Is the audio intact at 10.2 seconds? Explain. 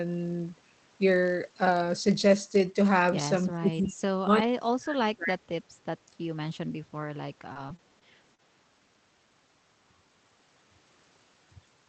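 No. At 10.2 seconds the speech carries a steady 43.1 Hz buzz that runs through the whole clip. This is a block size mismatch (padded): each incoming block falls slightly short of what the next stage reads, which fits a 1024-sample read, so a brief run of zeros closes every block. Because the shortfall is tiny, the speech plays at 0.999 times normal speed.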